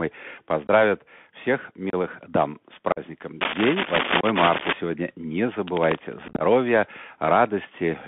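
Bluetooth CVSD headset codec runs through the whole speech clip: a one-bit-per-sample delta modulator at 64 kbps with an adapting step, on a line band of 150 Hz to 3.5 kHz. Nothing bright survives, sibilants turn scratchy, loud high sounds outrun the step, and a granular hiss sits underneath.

Unconcealed Bluetooth headset packet loss first appears at 0.67 s, where about 19 ms of audio drops out. At 1.90 s a 30 ms hole with hard edges comes just before "дам с". At 2.92 s a 45 ms gap follows "дам с". In each case a run of a few-millisecond packets between headset and phone never arrived and was replaced by silence or an idle pattern, so the sound cuts abruptly and can click.

Cable scratch noise spans 3.41 to 4.73 s, with dense, uneven rustling bursts about as loud as the speech. The likely cause is a worn cable or connector being moved, so its contact resistance fluctuates rapidly.

Within that scratch, at 4.21 s, another 26 ms packet-loss hole cuts in.

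Scratch noise returns from 5.67 to 6.00 s, at a similar level.

The heaviest packet loss comes at 6.28 s. About 79 ms is missing, scattered over 120 ms, with the longest run 22.5 ms. Many small losses close together give a rough, crackly, chopped texture instead of one clean gap.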